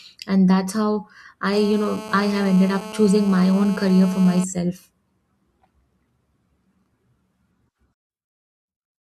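From 1.53 to 4.44 s there's GSM phone buzz, a steady raspy 217 Hz rasp about 16 dB under the speech, from a nearby phone mid-call getting rectified. Then from 7.94 s to the end the speech collapses by about 30 dB to a faint ghost, likely one channel inverted cancelling on the mono sum.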